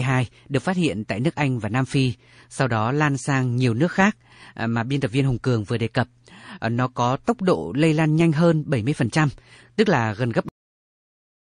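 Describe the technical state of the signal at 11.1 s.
At 11.1 s the signal is digital silence from a cut-off end. The sound stops abruptly at 10.49 s, just after "tức là gần gấp", and stays dead to 11.49 s. Its final buffers were never written or played, so there is no decay or room tail. That instant drop from mid-sound separates it from a fade-out or natural pause.

Up to that cut, the audio carries watery, swirly texture, metallic chirps on s sounds and smeared attacks. This is likely from MP3 compression at a starved bitrate, consistent with about 40 kbps: weak frequency lines flicker between frames. That flicker tells it apart from broadband noise or simple low-pass filtering.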